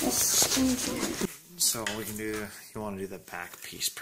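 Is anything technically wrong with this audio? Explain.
Yes, there are two faults.

Throughout the clip there is a filter restarted on every block. Instead of carrying its internal state from one processing block to the next, the filter begins each block from silence, so every block boundary produces a small transient. These arrive at 188 Hz, which fits a 256-sample block at 48 kHz, and blend into a steady buzz whose loudness rises and falls with the level of the sound.

From 1.25 s to the end, the level drops by about 22 dB, background included, and what remains is a faint copy of the sound. The likely cause is one channel inverted: with one side's polarity reversed, everything common to both channels cancels when they are summed to mono, and only the difference between left and right survives.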